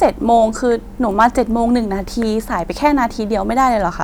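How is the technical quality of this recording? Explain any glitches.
One glitch stands out: a short burst of hard clipping from 1.20 to 1.39 s. For about 0.19 s the speech is driven roughly 3 dB past what the signal path can carry, so the loudest peaks are sliced flat. The flattened tops create extra high-frequency harmonics, heard as a brief crackly roughness. On the waveform the peaks sit squared off against a fixed ceiling, and a spectrogram shows a vertical smear of energy reaching up across the high frequencies at that moment.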